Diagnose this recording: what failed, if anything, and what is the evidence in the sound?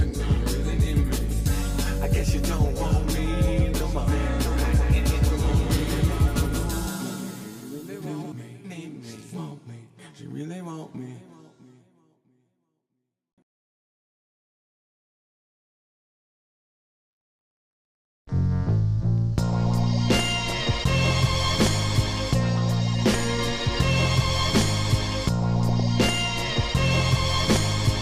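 From 4.52 to 8.32 s a second, full-band copy of the sound trails the original by roughly a fifth of a second, about 5 dB quieter, with no reverb tail and abrupt edges. This doubled audio track likely comes from a slower second capture path or misaligned edit copies.

At 20.49 to 20.52 s and again, longer, at 25.69 to 25.84 s, brief blips of noise sit over the programme. This is DAB burbling in the reception and decoding stage: weak-signal bit errors slipped past error correction into the MP2 frames, putting short blips of noise into individual sub-bands.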